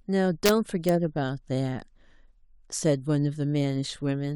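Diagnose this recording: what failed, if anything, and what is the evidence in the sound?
The fault is integer overflow in the sample-format conversion or a fixed-point gain stage. There are violent cracks on loud speech peaks from 0.46 to 0.49 s, and a single crack at 0.89 s. The signal was driven only about 1 dB past full scale in the first event and barely at all in the second. Instead of being limited, those samples wrapped to the opposite extreme, producing full-range jumps far harsher than clipping.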